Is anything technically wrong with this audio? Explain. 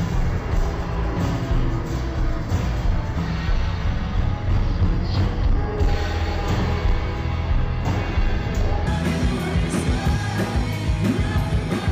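Yes. From 0.0 to 8.87 s, stereo read as mono: left and right samples interleave into one channel. The sound plays at half speed, an octave low.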